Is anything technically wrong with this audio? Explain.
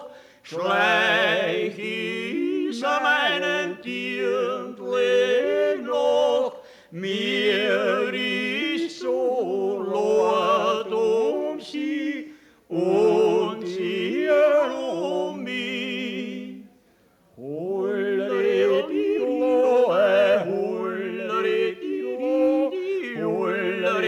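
No, no technical faults detected.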